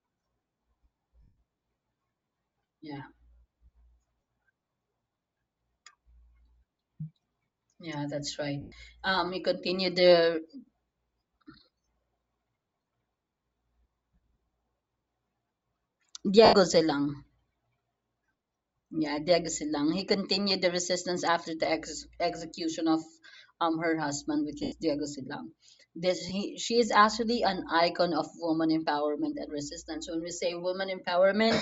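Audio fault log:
Throughout: Bluetooth LC3 compression. The speech has a breathy, grainy sheen on its upper end, likely from LC3 coding at a low rate, somewhere around 32 kbps with 10 ms frames. At that rate the encoder throws away much of the high spectrum and fills the gaps with shaped noise, so sibilants and the airy top of the voice come out plainly fizzy and grainy.
1.22 s, 8.61 s, 16.45 s, 18.26 s, 24.63 s, 26.29 s: lost LE Audio frames. These are brief dropouts where the decoder smears the last good spectrum forward with scrambled phase, so the voice turns into a hissy blur. The one at 1.22 s is longest, about 150 ms, and you can hear it start to fade. The ones right after "yeah that's" and "um her husband which" run around 110 ms and 90 ms. The hits at 18.26 s and 26.29 s are tiny blips of about 20 ms each.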